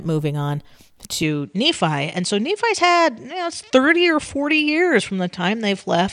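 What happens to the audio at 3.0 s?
At 3.0 s the speech sits in a span from 1.23 s to the end where the input likely switched to a poorer device. The band stops near 9.8 kHz, dulling the top, and a faint new noise floor appears, with no gap or level jump.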